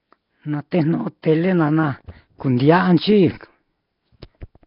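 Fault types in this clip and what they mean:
Nellymoser compression: The speech is heavily damaged, and nothing is heard above 5.3 kHz. Quiet bands come back as hiss, giving a rough, smeared, underwater sound. The likely cause is Flash's Nellymoser Asao codec, which fits a rate near 22 kbps.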